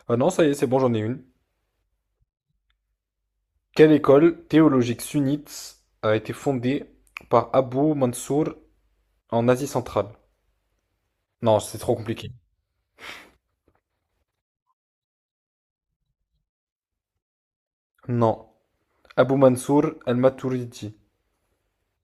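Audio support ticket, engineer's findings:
No fault found in the speech recording, so no findings for this ticket.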